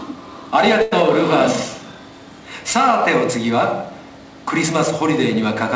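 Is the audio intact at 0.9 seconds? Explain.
No. A short stall from a late packet spans 0.82 to 0.93 s: the jitter buffer ran dry, so about 95 ms of the last sound was stretched and held, with a slight buzz or dip. On a spectrogram, frozen, smeared horizontal bands appear; the waveform shows a repetitive, sustained stretch.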